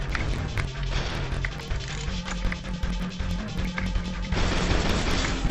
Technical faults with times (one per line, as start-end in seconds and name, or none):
0.00-5.51 interleaved audio read as planar